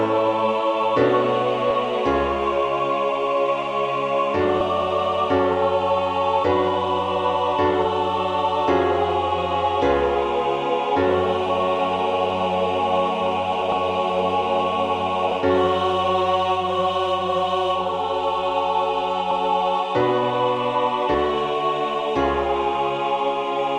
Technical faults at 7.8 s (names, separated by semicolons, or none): compressed frames skipped